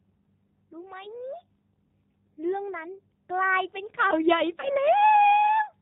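Throughout, the G.729 codec is plainly audible. Speech is rebuilt at 8 kbit/s from a vocal tract model and a few pulses per frame, so it sounds rough and slightly synthetic. On a spectrogram, nothing appears above 4 kHz.

From 4.60 to 4.71 s there is VoIP packet loss concealed by the speech codec. About 30 ms of audio went missing, which fits a single lost packet. The decoder filled the gap by repeating its last pitch and filter with falling gain, so a brief buzzy tone or coloured noise that fades replaces the speech. The damage carries past the gap, and the speech stays weak or distorted until about 4.71 s. A spectrogram shows the sound dimming before normal speech returns, and the waveform shows a short stretch with shrinking amplitude.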